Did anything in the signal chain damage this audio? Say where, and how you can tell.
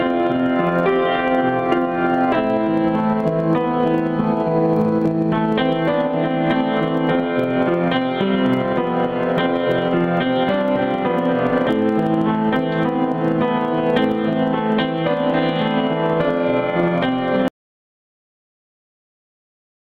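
Yes, there's an audio dropout to silence at 17.48 s that runs right to the end. The sound cuts off mid-flow into silence with no room tone, so the input likely lost its device or link while the recorder kept writing.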